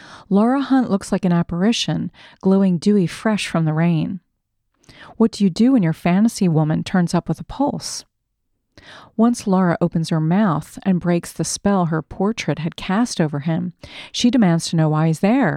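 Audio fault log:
No technical fault is audible anywhere in this speech recording, and the signal runs continuously with nothing that calls for attention.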